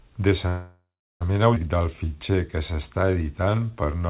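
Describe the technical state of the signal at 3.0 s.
At 3.0 s you're in the middle of a jitter buffer slow-down running from 1.76 to 4.08 s. The receiver was short on reserve, so it repeated single pitch periods to stretch things out. That adds about 277 ms, so the speech plays at 88% speed with the same pitch and sounds drawn out. The narrowband call path caps everything at 4 kHz.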